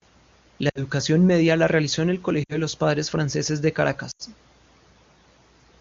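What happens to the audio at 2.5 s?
Lost AMR speech frames occur from about 2.44 to 2.57 s. About 60 ms of speech is missing, which fits three consecutive 20 ms frames lost to radio errors. The wideband AMR decoder, running at 23.85 kbit/s, fills the gap by repeating the last good pitch and vocal tract settings with shrinking gain. The sound smears briefly and fades toward silence within that short span, then comes back weak or rough for a moment.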